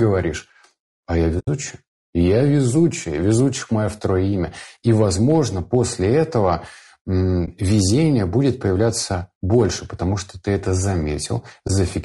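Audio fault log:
Throughout: low-delay AAC compression. The speech was likely coded with AAC-ELD at 32 kbps. Its short frames resolve pitch harmonics poorly, so the voice sounds plainly rough and grainy, with noise filling the gaps between harmonics and a thin, synthetic-sounding top band.
1.39–1.48 s, 7.45–7.48 s, 11.67–11.70 s: AAC frame loss with muting. Frames failed to arrive and the decoder zeroed their spectrum. The first hole, after "а я", lasts about 80 ms, which fits four lost frames. The others last about 20 ms each. Overlapping windows fade each one out and back in, so they are soft-edged gaps.
4.88–5.77 s, 9.53–9.61 s: hard clipping. The signal exceeded the level a stage could pass, by about 2 dB in the first stretch, which follows "везучих мое второе имя", and by about 1 dB in the brief second one, which comes just before "потому что ты это". The flattened peaks add high harmonics, heard as crackly harshness on the loud syllables.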